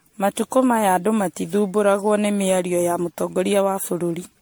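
Right from the start the speech has a swirly, hollow, smeared quality, with soft attacks and nothing above about 19.9 kHz. That's more damage than a single MP3 pass near 100 kbit/s would do, so it's likely generation loss, with around fifteen re-encodes each piling up fresh quantisation noise and spectral holes.

Between 2.43 and 2.82 s there are four CD scratch ticks, the longest only about a millisecond long. A scratch wipes out more data than error correction can rebuild once per disc revolution, so the player briefly interpolates or mutes, and you hear a quick run of regular clicks.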